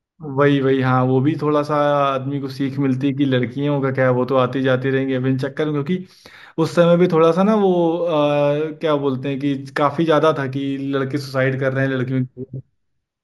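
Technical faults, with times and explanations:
Throughout, imaging from linear upsampling: the top of the speech band sounds dulled, and sibilants carry a faint metallic shimmer. The sound points to a 16 kHz recording raised to 48 kHz by joining neighbouring samples with straight lines. That crude interpolation softens content just below 8 kHz and lets a mirrored copy of the spectrum through between 8 and 16 kHz, roughly 40 dB below the signal, adding that thin glassy edge.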